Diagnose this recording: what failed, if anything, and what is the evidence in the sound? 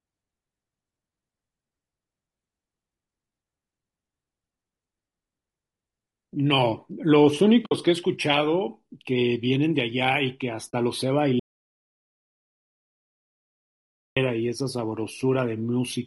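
At the codec stage, the speech is rough and grainy throughout, with noise filling the gaps between harmonics and a thin, synthetic-sounding top band. This is likely low-delay AAC compression (AAC-ELD) at a low bitrate, around 32 kbps. Its short frames smear the harmonic structure, which a spectrogram shows as blurred harmonic lines.

Also at the codec stage, there is AAC frame loss with muting at 7.65–7.72 s (60 ms, which fits three lost frames) and 10.69–10.74 s (40 ms, two frames). The decoder zeroed the missing spectra, and overlapping windows faded the sound out and back in. The waveform shows soft-edged notches.

There is an audio dropout to silence from 11.40 to 14.16 s, about 2.8 s. The speech cuts off mid-flow and returns abruptly. The gap is silent with no room tone, a flat line on the waveform and a blank band on the spectrogram. The likely cause is the input being lost upstream of the encoder, which then kept writing silence.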